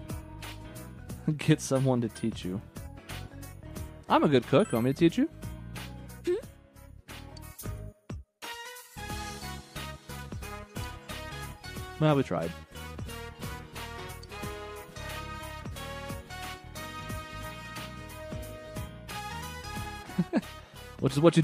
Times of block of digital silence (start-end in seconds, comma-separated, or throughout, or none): none